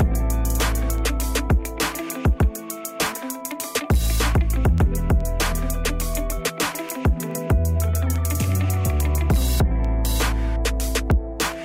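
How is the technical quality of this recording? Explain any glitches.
The recording has word clock ticks throughout, from 0.14 s to 11.54 s: sharp clicks of uneven strength, about every 0.4 s, roughly thirty in all. An unlocked receiving clock, off by around fifty parts per million, drops or repeats one sample at each slip. Spectrograms show evenly spaced thin vertical broadband lines, and the waveform shows single-sample steps.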